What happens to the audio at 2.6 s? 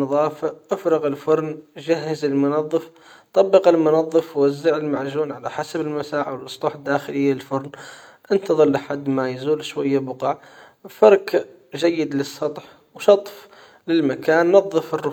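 Nothing goes wrong at 2.6 s; the speech carries on intact through that moment, with no dropout, click, distortion or other fault.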